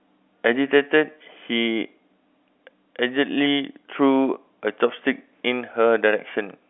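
No technical faults occur at any point in this speech clip.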